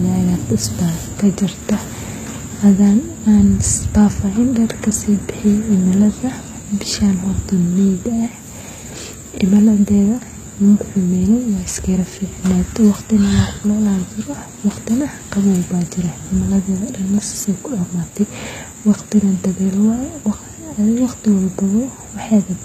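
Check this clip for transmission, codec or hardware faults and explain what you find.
One codec fault runs through the whole speech clip: HE-AAC compression is the likely cause. Only the lower spectrum is truly coded, and the treble is rebuilt by copying lower bands upward under a coarse envelope. Sibilants sound gritty and metallic, which fits a bitrate around 20 kbps. On a spectrogram, the upper band appears smeared and repeated, with harmonics misaligned at the crossover and nothing above 14.9 kHz.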